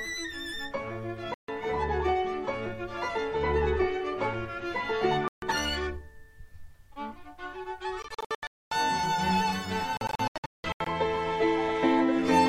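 Bluetooth dropouts cut the audio to silence at 1.34 s and 5.28 s for about 0.14 s each, then in broken bursts totalling 0.49 s across 8.02–8.72 s and 0.55 s across 9.97–10.87 s. The likely cause is late wireless packets being discarded, with playback resuming further on as if uninterrupted.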